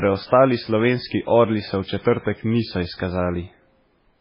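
Throughout, likely MP3 compression starved of bits, fitting a 16 kbps bitrate, removes everything above 5.3 kHz and leaves the speech heavily watery.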